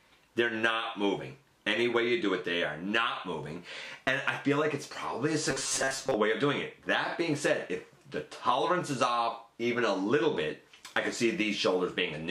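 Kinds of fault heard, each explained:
Robotic sound from repeated short buffers: From 5.50 to 6.15 s the sound turns into a stiff, metallic buzz fixed at 134 Hz that loosely tracks the original contour. It is likely caused by audio arriving too slowly, with a segment of about 7.5 ms replayed to fill the gaps while about half the real audio is skipped. Unlike a stutter or dropout, there are no silences, only a steady imposed pitch.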